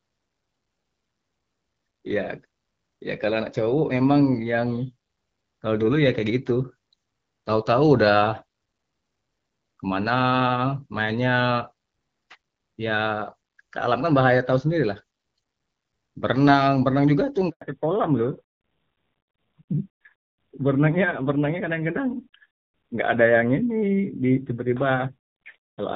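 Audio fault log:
17.49–17.61 s, handover gap: The sound cuts out for 120 ms. It fades within a few tens of milliseconds, then stays silent until audio resumes at 17.61 s. This is the call being passed from one network to another. No speech frames arrived while the link switched, so nothing could be played. Whatever was said in that window is gone. The silence is clean because the decoder had nothing to work with.
17.61 s to the end, fallback to narrowband: From this point nothing is left above 4 kHz. The sound turns duller and muffled, with a rougher, grainier texture. Before the handover the audio had the extended top of HD Voice, with light coding softness consistent with AMR-WB at 12.65 kbit/s. The new link fell back to an older narrowband codec. The roughness fits AMR-NB at 7.4 kbit/s, which models the voice more coarsely and discards everything above telephone band.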